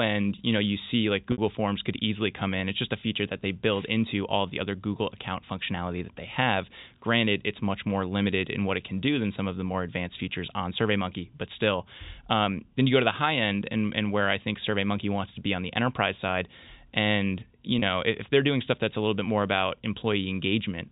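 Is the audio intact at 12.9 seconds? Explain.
Yes, the speech at 12.9 seconds is intact, with no fault at that moment.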